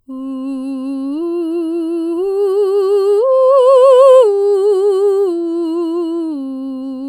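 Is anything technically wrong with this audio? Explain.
No, the music carries through without any audible technical faults in the signal.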